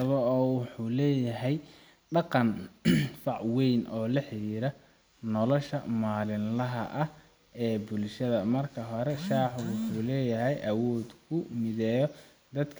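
No technical faults can be heard anywhere in the speech.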